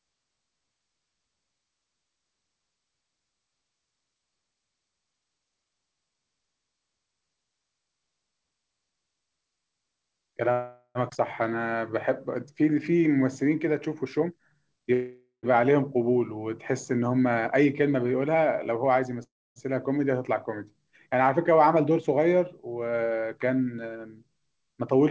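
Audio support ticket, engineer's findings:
Call audio freeze, 10.52–10.98 s, 14.93–15.46 s, 19.23–19.59 s. Last sound held as a fading buzz, then silence: about 50 ms, 110 ms, 270 ms. Likely jitter buffer underrun from held-up packets. Audio resumes where it stopped, so gaps of 0.43 s, 0.50 s and 0.33 s are inserted and nothing is lost. Spectrogram: smeared, decaying copy of the preceding spectrum, then a blank column. Waveform: tapering periodic tail before flat line.

Jitter buffer speed-up, 14.02–14.93 s (137%, roughly 0.3 s removed), 17.30–19.19 s (107%, about 0.15 s), 21.51–23.84 s (108%, about 0.2 s). Buffer over target, so pitch-period chunks are cut repeatedly. Speech sounds hurried with unchanged pitch, worst in the first stretch. Spectrogram: harmonic spacing unchanged, syllables compressed in time. Waveform: envelopes shortened, with small splice points. Both fault kinds sit on the G.722 call path at 64 kbps, with nothing above 8 kHz.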